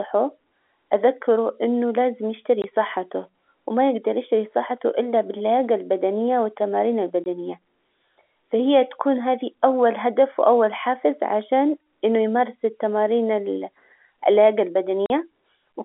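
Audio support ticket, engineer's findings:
Packet loss filled with silence. Three hard-edged holes: 2.62–2.64 s and 7.24–7.26 s (20 ms each), 15.06–15.10 s (40 ms). Durations fit a 20 ms packet, the last likely two consecutive packets. Receiver inserts zeros, leaving hard edges at each gap. Unlike concealment, which repeats or fades the last audio, these gaps are dead silence. Unlike a level dropout, their lengths are exact packet multiples. Audible through the narrow telephone band of the G.711 path.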